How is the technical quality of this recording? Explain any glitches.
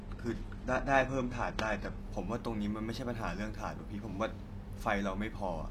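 The recording has one glitch, at the start. Adaptive stream starting at a low bitrate, 0.0 to 2.0 s: the player began on a low-quality stream, consistent with roughly 16 kbit/s HE-AAC, before measuring the connection. The speech sounds dull, with synthetic treble and stronger codec artefacts, then abruptly improves with no gap, consistent with a step up to 96 kbit/s AAC-LC. Nothing is present above 12.3 kHz.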